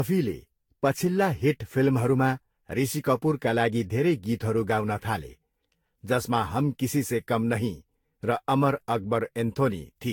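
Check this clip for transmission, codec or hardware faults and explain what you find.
One codec fault runs through the whole clip: generation loss. The audio was likely put through lossy Vorbis coding about seven times, at rates that sound near 75 kbit/s. Each pass requantised on a shifted frame grid, so noise and spectral holes accumulated. The speech sounds swirly, smeared and hollow, consonant attacks blur, and nothing remains above 19.1 kHz.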